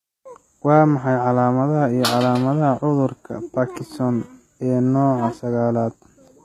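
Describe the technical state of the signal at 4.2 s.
At 4.2 s, as throughout, the speech is band-limited near 14.9 kHz and its treble sounds gritty and lispy, likely HE-AAC compression rebuilding highs from copied lower bands at roughly 20 kbps.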